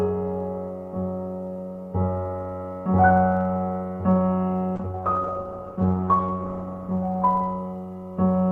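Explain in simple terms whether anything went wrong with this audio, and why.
A low buzz, about 47 times a second, runs through the whole recording. This is a block size mismatch (truncated): one stage chops off the end of each audio block, which fits 1024-sample blocks.

From 4.79 s to 8.25 s the sound turns rough and muffled, worst for about 1.6 seconds. This is a call bitrate drop: the connection weakened, so fewer bits carried the audio.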